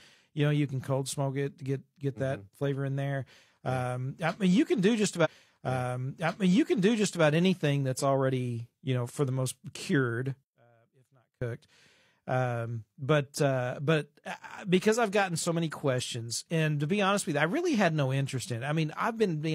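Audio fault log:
5.21 to 7.20 s, stream segment repeated: the player fetched or queued the same stretch of the stream a second time, so about 2.0 s of speech plays over again before the programme carries on. A short blip marks the jump back to the start of the duplicated segment, where the audio splices onto material it has already played, and everything after this point runs roughly 2 s later than it should.
10.43 to 11.42 s, one channel inverted: the speech drops by about 31 dB and nearly disappears for just under a second, the likely cause being one stereo channel flipped in polarity before the two were summed to mono. Because the speech sits equally in both channels, the flipped copy cancels the other almost completely, leaving only a faint residue from the small differences between the channels.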